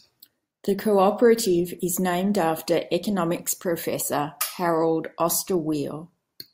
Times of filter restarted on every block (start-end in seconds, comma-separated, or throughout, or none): none